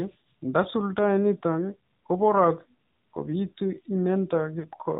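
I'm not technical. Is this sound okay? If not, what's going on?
No. The whole clip has passed through the AMR narrowband mobile codec, the compression used for older mobile phone calls. It discards everything above 4 kHz, so the speech sounds muffled and phone-like. It rebuilds the speech from a rough model, which here plainly adds a buzzy, synthetic edge.

There is also a short gap from lost AMR speech frames at 4.60 to 4.66 s. For about 40 ms, which fits two lost 20 ms frames, the decoder had no data. It repeated its last good settings at falling volume, giving a brief dip or warble.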